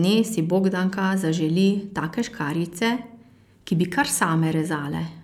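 No dropouts, clicks, distortion or other transmission faults are audible anywhere in the recording.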